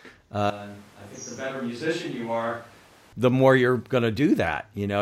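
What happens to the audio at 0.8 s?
A switch to a distant microphone runs from 0.50 to 3.13 s, likely because the close microphone's signal dropped out and a farther one took over. The voice turns suddenly roomy and thin, falls roughly 10 dB, and background noise rises to about 25 dB below the speech.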